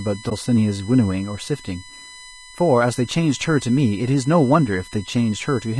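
From the start, a steady USB whine sits under the speech: a fixed tone at 1 kHz, strongest at its 2 kHz harmonic, about 25 dB below the signal. Current drawn in the USB bus's 1 ms frames leaks into the audio path. The kilohertz pitch separates it from mains hum at 50 or 60 Hz.

Throughout, the speech also sounds rough and grainy, with noise filling the gaps between harmonics. This is likely low-delay AAC compression (AAC-ELD). Its short frames resolve pitch poorly, and the damage fits a low bitrate of around 32 kbps. It differs from background hiss because it follows the speech itself.

At 0.29 to 0.32 s comes AAC frame loss with muting: one frame, about 20 ms, is zeroed by the decoder. The overlapping windows fade it out and back in, so it sounds like a brief dip, unlike a hard dropout with clicks.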